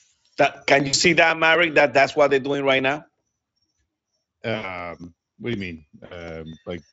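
A speech recording carried over a Speex-coded VoIP link, with light codec roughness, shows three dropouts covered by VoIP packet loss concealment by the speech codec, at 0.87–0.95 s, 4.55–4.81 s and 6.05–6.26 s. About 60 ms, 80 ms and 60 ms of audio went missing, consistent with three or four 20 ms frames each. The decoder extends the last pitch and filter state into a fading buzzy tone or coloured noise, and the voice stays thin briefly after packets resume.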